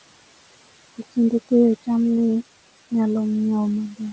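Throughout the speech, noise suppressor artifacts: the room noise is pushed down by about 18 dB between phrases and returns beneath them.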